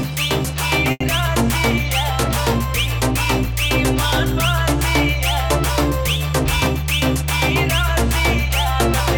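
At 0.91 to 1.03 s a sound is held about 90 ms too long with a faint buzz; a late packet drained the jitter buffer, causing a short stall.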